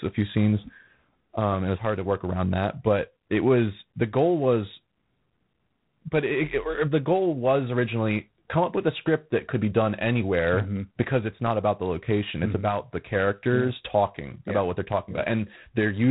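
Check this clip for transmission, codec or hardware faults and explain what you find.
There is one fault: the speech has passed through a G.726 ADPCM codec, and the damage is plainly audible throughout. G.726 does not send each sample directly. It sends a few bits describing how far the signal strays from an adaptive prediction. Here the coarseness points to the 24 kbit/s mode, only three bits a sample, so the quantisation error is large. It shows up as a harsh, rasping hiss that rises and falls with the speech. Nothing above 4 kHz passes, so the audio also sounds narrow and telephone-like.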